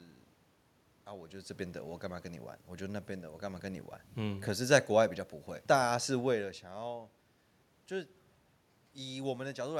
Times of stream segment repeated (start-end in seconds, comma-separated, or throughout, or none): none